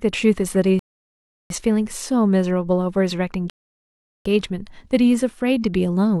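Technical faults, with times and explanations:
0.79–1.50 s and 3.50–4.26 s, rebuffering stall: the speech drops abruptly into silence, once for about 0.71 s and once for about 0.75 s, then picks up exactly where it broke off, with nothing skipped or repeated. The player used up its downloaded audio and had to wait for more data before continuing, so each gap adds dead time to the playback without removing any of the speech.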